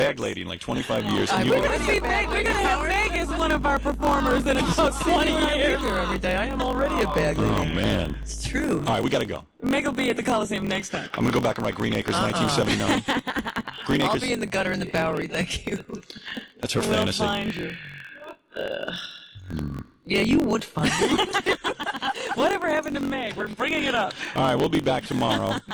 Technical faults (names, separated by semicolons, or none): block size mismatch (truncated); mains hum